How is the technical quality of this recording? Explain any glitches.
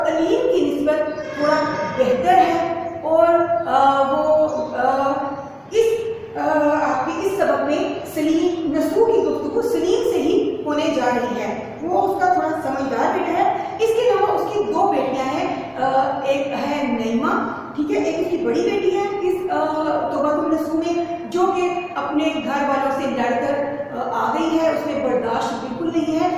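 The technical quality of this recording holds up, with no glitches to explain.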